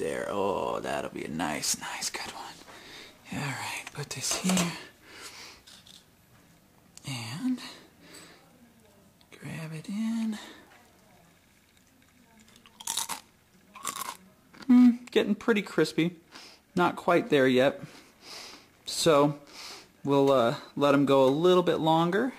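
No technical faults can be heard anywhere in this audio.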